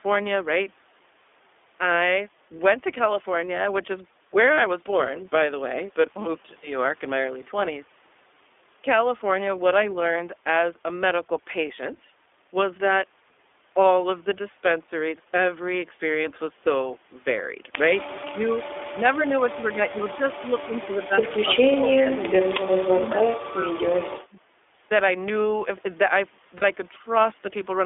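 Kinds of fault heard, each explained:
iLBC codec: slightly rough, synthetic speech with nothing above 3.5 kHz, from a 15.2 kbps narrowband codec coding each 20 ms frame on its own.
lost iLBC frames: brief held, buzzy vowel sounds at 4.54, 16.22 and 26.58 s, as the decoder repeats the last pitch cycle across 20 to 40 ms gaps.
speech suppressed in double talk: the voice dips, at worst by about 30 dB, or drops out in pieces late in the clip, likely an echo canceller ducking overlapping talk.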